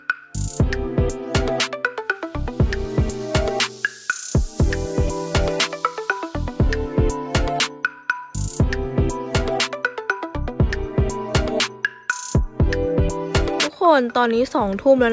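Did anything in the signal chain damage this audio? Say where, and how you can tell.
No, nothing in the chain has left audible damage here: the signal holds steady throughout, with no stage from capture to playback leaving a trace that can be heard.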